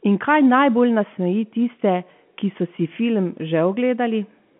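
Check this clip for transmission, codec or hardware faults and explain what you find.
No transmission, codec or hardware faults turn up anywhere in this speech. The G.711 telephone coding is audible as a narrow line band of roughly 150 Hz to 3.4 kHz, with nothing above about 3.8 kHz and at most a faint trace of coding damage.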